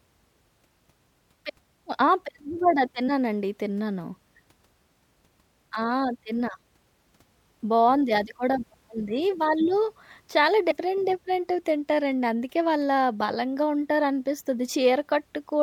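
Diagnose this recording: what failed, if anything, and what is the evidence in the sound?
At 3.07 s, 7.59 s and 10.70 s the speech lurches forward, dropping roughly 50 ms, 30 ms and 50 ms: about two frames, one frame and two frames of a codec whose frame length is 26.1 ms. This is compressed frames skipped, a codec or storage fault. Frames missing from the file, or rejected by the decoder as damaged, are never played, and the jumps are frame-sized.

At 5.75 s there is a single sharp tick. That is a block of digital silence, a driver or buffer fault. About 1.45 ms of samples, which fits a 64-sample block, drops to silence and returns with no fade, putting a hard edge at each side.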